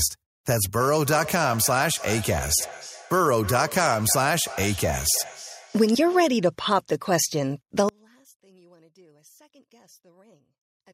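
From 0.76 to 6.5 s there is feedback echo between two devices. Each phrase returns roughly every 300 ms, thinner and more ringing each pass, peaking about 14 dB below the speech. A second device is replaying this microphone, and neither echo canceller removes the other's output.

From 7.89 s to the end, the speech drops by about 33 dB and turns faint. The likely cause is one channel inverted. With one channel's polarity reversed, the shared centre cancels when the channels are summed to mono.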